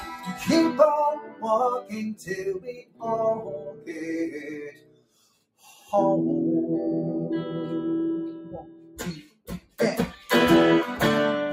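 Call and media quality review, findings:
Pumping and thinning across the whole clip; held tones and decaying tails sink while attacks pass. Noise suppressor applied to music or sounds: a speech-tuned suppressor in the chain treats steady content and ambience as noise, with level swings of around 15 dB.

Sound cut by the noise suppressor at 1.20–1.44 s (about 13 dB down), 2.59–3.04 s, 3.59–4.02 s (about 14 dB), 4.34–5.90 s and 8.34–9.79 s (each about 15 dB). Sustained passages dip hard and tails are cut short as the suppressor clamps them.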